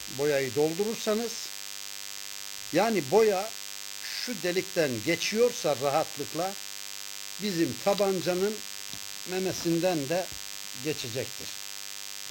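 DECT cordless phone buzz runs throughout the audio, from start to finish. A nearby DECT handset or base station transmits a short radio burst every 10 ms, and the audio circuitry rectifies it. The result is a steady, thin buzz at 100 Hz, rich in harmonics, sitting roughly 10 dB below the signal.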